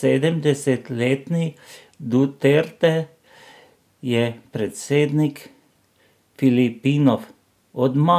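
No technical faults are audible.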